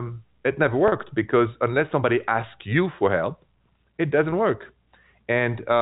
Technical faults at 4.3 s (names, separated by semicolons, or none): packet loss with pitch repetition